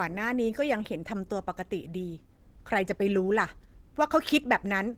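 A speech clip with Opus compression artefacts throughout, likely from encoding at a bitrate around 16 kbps in the codec's hybrid mode: the sound is muffled, hoarse and grainy. A spectrogram shows noise-filled bands above the lower range and nothing above 20.3 kHz.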